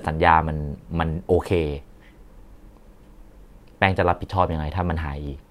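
From 1.14 s to 5.27 s a click recurs every 1.38 s, about four in all. These are clock drift buffer slips, likely two independent clocks drifting around 150 ppm apart, so each slip drops or repeats a few samples.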